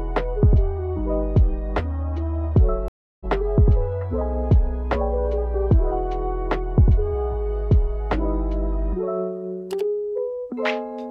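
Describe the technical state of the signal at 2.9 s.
At 2.9 s the signal is in the middle of a stream reconnect, spanning 2.88 to 3.25 s. The connection dropped, leaving about 321 ms of dead silence, and a fresh decoder picked up the stream around 0.4 s further on, so material is skipped rather than delayed. The waveform shows a flat gap with a muted or fading first frame; the spectrogram shows a blank vertical band, then content that doesn't continue from before.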